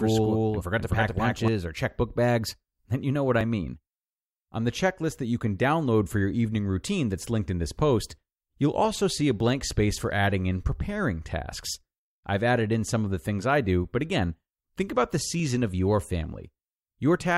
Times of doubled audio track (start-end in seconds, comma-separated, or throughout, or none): 0.00-1.48